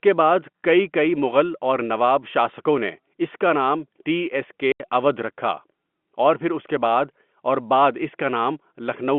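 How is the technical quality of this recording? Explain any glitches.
The speech carries one audible glitch, heard through a telephone-band line with G.711 coding.

Packet loss filled with silence, 4.72 to 4.8 s: a run of lost packets, about 80 ms, which fits four 20 ms packets, was replaced by pure silence. The speech drops out abruptly just before "اوّدھ رکھا", with hard edges.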